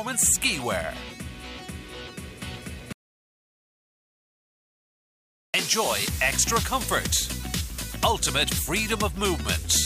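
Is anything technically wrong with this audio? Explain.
Yes. An audio dropout to silence runs from 2.93 to 5.54 s, about 2.6 s long, likely from the input being lost while the recorder kept writing silence. The sound cuts out abruptly into silence, with no room tone, then resumes mid-flow, so that stretch is simply missing.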